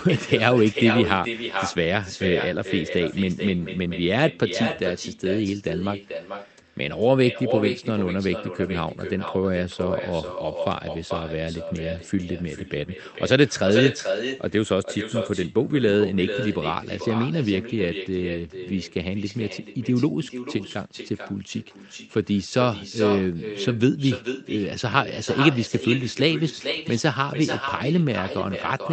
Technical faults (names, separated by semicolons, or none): echo with no canceller